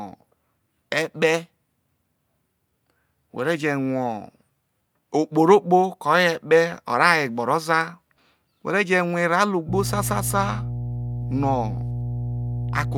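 At 9.69 s a mains hum appears and continues to the end of the clip at 12.98 s. It is a steady 60 Hz tone sitting under the speech, loud enough to compete with it, only a few decibels below the speech level. The power line is coupling into the signal path, through a ground loop or a nearby transformer. The low drone starts late in the clip rather than being present throughout.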